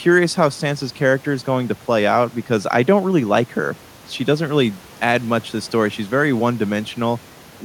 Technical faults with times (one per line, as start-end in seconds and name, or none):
none